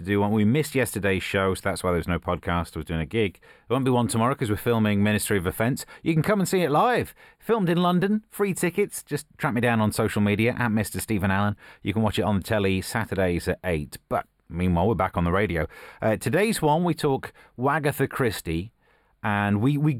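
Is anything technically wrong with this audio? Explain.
Yes. A channel delay (comb filtering) runs through the entire speech clip. One channel arrives a tiny fraction of a millisecond behind the other, which fits a lag of just a few samples. When the two are summed to mono, their shared content cancels at evenly spaced frequencies, with the first notch near 7 kHz. The upper range sounds hollow and phasey. On a spectrogram, a steady dark horizontal band sits around 7 kHz for the whole clip.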